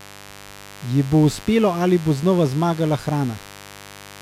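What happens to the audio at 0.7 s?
At 0.7 s the speech sits on a mains buzz, which runs through the whole clip. Sharp switching spikes arrive twice in every 50 Hz cycle, spreading harmonics into the kilohertz range. It sounds like a steady, raspy buzz, roughly 20 dB below the speech.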